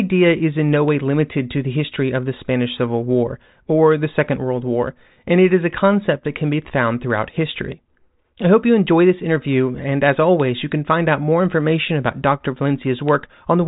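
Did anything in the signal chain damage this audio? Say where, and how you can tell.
No, the speech is intact: its band stops at 3.8 kHz with at most a faint trace of coding noise, which fits a G.726 ADPCM path running normally at 40 kbit/s, and no stage of the chain has added damage beyond that.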